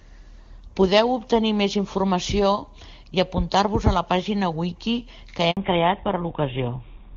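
This speech clip has a handover gap at 5.51 to 5.57 s. The call was moved from one network to another, and no speech frames arrived during the switch. The sound fades out within a few tens of milliseconds and leaves 60 ms of silence before the new link takes over. Whatever was said in that short window is lost rather than delayed, so the speech resumes with a small piece missing.

Right after the gap, from 5.57 s to the end, there is a fallback to narrowband. The network dropped the call from HD Voice to an older narrowband codec, consistent with a move from AMR-WB at a high rate to GSM full rate at about 13 kbit/s. Before the switch, the wideband coding gives clear, full-sounding speech with only faint codec traces. Afterwards, nothing above 4 kHz survives, so the voice turns duller and rougher for the rest of the clip.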